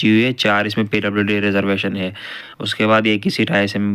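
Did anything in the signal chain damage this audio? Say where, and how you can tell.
Yes: lost LE Audio frames over the Bluetooth LE Audio codec link, from 2.39 to 2.59 s. About 128 ms of audio dropped out across that 195 ms span, the longest gap around 50 ms. The LC3 decoder filled each gap by repeating the previous spectrum with randomised signs, smearing tonal content into noise.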